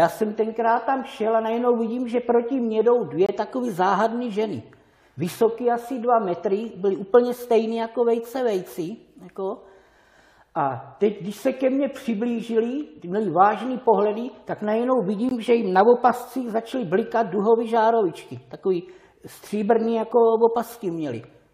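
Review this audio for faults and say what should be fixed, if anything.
There are two short holes where the sound cuts out with hard edges: one from 3.26 to 3.29 s (about 24 ms) and another from 15.29 to 15.31 s (about 20 ms). This is a gap between stream segments. The timestamps of adjacent segments don't quite line up, so the player fills the space with silence. No audio is lost; the timeline just gets stretched slightly. The spacing of the two holes fits 4-second segments. To prevent it, have the packager write each segment's timestamps so they continue exactly from where the previous segment ended.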